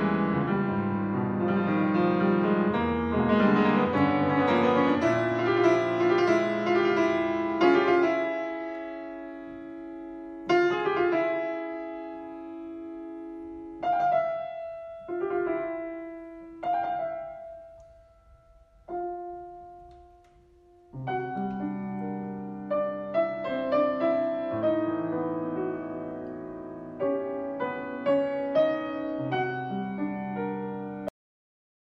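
At 31.08 s the sound stops abruptly in mid-flow, with no fade or natural decay, and the remaining stretch to the end is flat digital silence. This is a cut-off end. The final buffers of audio were never written out or played back, so whatever was sounding at that instant is severed rather than allowed to finish, and the recording simply ends on that hard edge.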